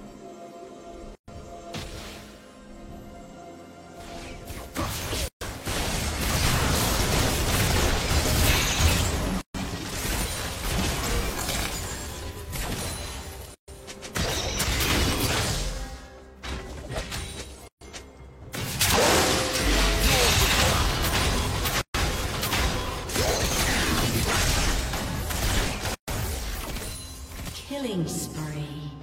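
At 1.15, 5.28, 9.41, 13.55, 17.68, 21.81 and 25.95 s, a gap at a join of encoded pieces cuts the sound for about 130 ms, repeating every 4 s. The encoder's start-up delay and last-frame padding were left in at each join, so silences with smeared edges break the flow before the sound resumes where it stopped.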